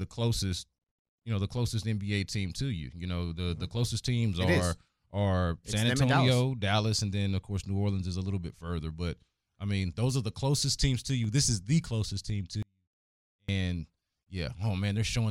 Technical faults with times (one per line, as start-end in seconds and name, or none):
12.63-13.48 audio dropout to a faint residue